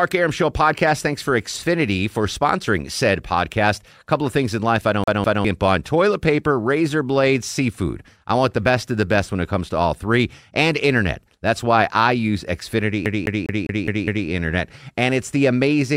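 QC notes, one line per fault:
5.04–5.45 s, CD stuck on one turn: right after "things in life I", a 0.2 s slice of the speech plays twice with a brief mute at each jump before the clip resumes at "on toilet paper razor". The laser is being thrown back one track per disc rotation. Each pass is identical, which separates it from an echo or a stammer.
13.05–14.28 s, CD stuck on one turn: the same 0.2 s loop returns, repeating six times. The fixed loop length and the even gaps give it the rapid, mechanical stutter of a skipping disc.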